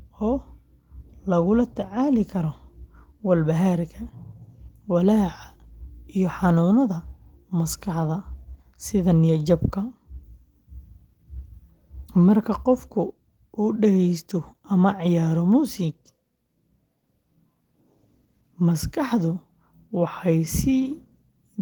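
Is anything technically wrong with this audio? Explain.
No, no technical faults here.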